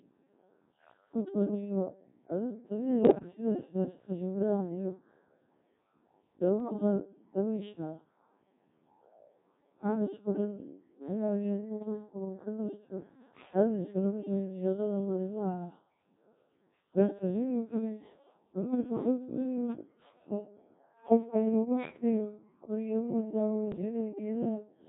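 From the start the speech carries Codec 2 vocoder damage. The voice is rebuilt from sine waves using only pitch, voicing, energy and envelope, which fits a rate near 1.6 kbit/s. It sounds heavily robotic and buzzy within a 200 Hz to 3.7 kHz band. Unlike transform-codec smearing, the waveform itself is resynthesised.

Bit errors on digital voice radio strike at 3.01 to 3.28 s, 6.60 to 6.73 s and 23.72 to 23.81 s. The first is densest, with roughly a tenth of bits flipped. Corrupted frame parameters make the voice lurch in pitch, level and timbre into warbling bleeps, rather than dropping to silence as packet loss would.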